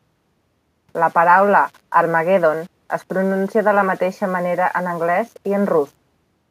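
Speech throughout, with a gritty grain following the signal about 35 dB down: low bit depth without dither, likely rounded to around 8 bits.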